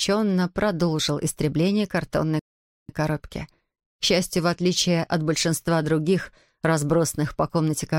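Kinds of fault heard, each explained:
Rebuffering stall: At 2.39 s the sound drops to silence for about half a second, then picks up at 2.89 s exactly where it left off, with nothing skipped. The player ran out of downloaded audio and waited for more, adding roughly 0.5 s.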